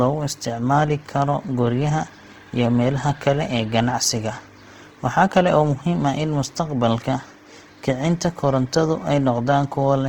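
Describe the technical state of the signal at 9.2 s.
At 9.2 s, as throughout the clip, the speech is grainy and rough, with noisy fill standing in for lost detail, likely from Opus compression in its CELT music mode at a low bitrate around 16 kbps. Unlike MP3, there's less swirling, and the band stays wide up to about 20 kHz.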